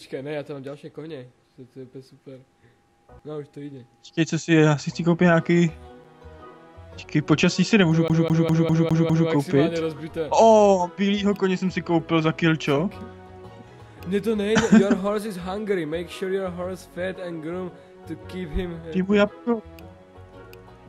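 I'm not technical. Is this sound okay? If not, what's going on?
No. From about 8.08 to 9.30 seconds, the sound gets stuck. It plays the same short piece, about 0.2 seconds long, six times in a row. Between repeats there is a tiny silent gap. This is a CD stuck on one turn. A scratch on the disc makes the player jump back to the same spot each time the disc spins. That gives the fast, even stutter you hear before the sound moves on.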